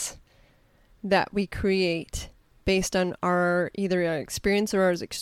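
Speech with no audible faults.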